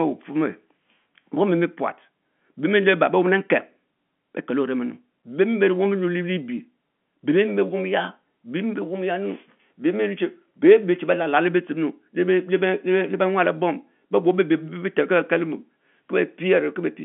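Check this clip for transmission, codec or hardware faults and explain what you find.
No faults found.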